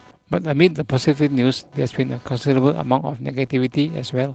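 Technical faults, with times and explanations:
Throughout, computer activity noise: changing load on the computer's processor, graphics or mouse shifted the ground shared with the audio circuit, so that activity leaked into the signal as an electrical buzz. It pulses at a few hundred times a second, sitting roughly 30 dB below the speech. Because it follows the computer's activity rather than the voice, it carries on through pauses and changes character independently of what is said.
3.45 to 3.49 s, short concealed packet loss: about 20 ms of the call arrived too late for the decoder, and the receiver papered over the gap by extending the preceding sound from its pitch or spectral shape for about 20 ms before blending back into the real signal. The result is a brief smeared wobble near the end of the clip. Any short consonant falling in that window can drop out.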